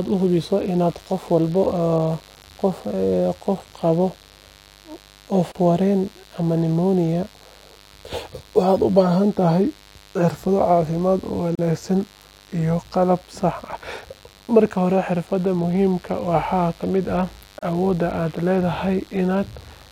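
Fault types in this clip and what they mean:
Mains buzz: A steady, raspy buzz runs under the whole speech clip. It comes from sharp switching spikes on a 50 Hz supply, twice per cycle, so its harmonics climb well into the kilohertz range. It sits roughly 30 dB below the speech.
Gap at a join of encoded pieces: Three short silences open in the speech, about 34 to 37 ms long, at 5.52, 11.55 and 17.59 s, every 6 s. The last follows "ka mid ah". Separately encoded pieces were joined untrimmed, and the sound resumes where it stopped.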